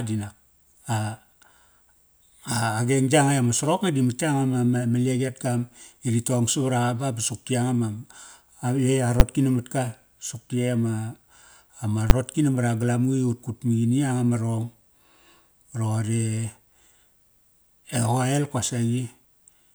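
At 9.2 s and again at 12.1 s you get a single hard bang in the speech, and both are the same fault: invalid numbers at full scale. Somewhere in the processing a calculation blew up into infinite or invalid values, and those got clamped to the maximum sample value for a 10 ms block. With a block that short, the onset and release pops merge, so each one lands as one sharp, very loud click.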